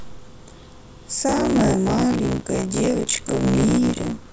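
Buffer tearing starts at 1.28 s and lasts to the end of the speech. The writing side and the playback side of the ring buffer have drifted until they cross inside each period, so about half of every buffer replays audio from around 30 ms earlier, with hard joins on both edges. The repeat rate of 62.5 Hz fits a 256-sample buffer, and it sounds like a steady robotic buzz that rides on the speech.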